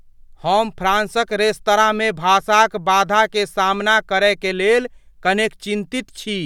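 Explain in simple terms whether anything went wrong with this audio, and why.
Nothing went wrong with this audio; the speech comes through with no fault to point to.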